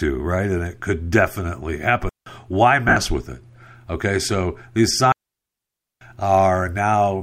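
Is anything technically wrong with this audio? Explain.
Yes, the speech is interrupted three times, by two different kinds of fault.

Digital wireless dropouts occur from 2.09 to 2.26 s (about 170 ms) and from 5.12 to 6.01 s (about 0.9 s). Each time, the wireless link lost too much data, so the receiver muted rather than play corrupted audio. You hear a clean hole of near silence entered and left through a very short fade. There is no crackle or noise burst at either edge, and no smeared remnant of the sound fills the gap. That empty mute is what separates these from lost frames.

Lost LE Audio frames occur from 2.88 to 2.96 s. About 68 ms of audio is missing across a 75 ms span, nearly all of it in one run of roughly 70 ms. Here the LC3 decoder conceals the gap instead of muting it: it repeats the last good spectrum with randomised phase signs and fades it as the loss continues. The speech briefly turns into a hissy, noisy smear that decays toward quiet, rather than cutting cleanly to silence as the dropouts do.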